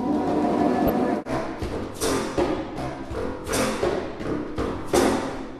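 At 0.87 s a corrupt frame decoded as a short burst, ending at 0.90 s. It lasts about 30 ms, roughly one frame. Damaged bits gave the decoder wrong values, so energy landed at wrong frequencies. It sounds like a chirp, squeak, blip or burst of noise, peaking near -10 dBFS.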